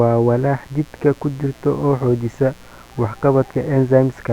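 A speech recording with mains buzz running under it from start to finish, roughly 30 dB below the speech. The buzz is built on 60 Hz mains: sharp switching spikes arrive twice per cycle, 120 times a second, and their harmonics reach up into the kilohertz range. That spread of upper harmonics gives it a raspy, edged quality, unlike plain mains hum, which would sit as a smooth, low tone near 60 Hz alone.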